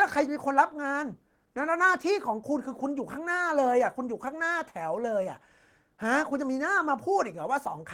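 No audible technical faults anywhere in the speech recording.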